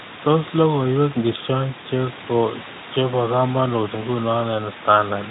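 Nothing goes wrong anywhere in this speech recording: the room's background sits about 16 dB under the talking, and the Speex coding at 15 kbps behaves as it should for that setting.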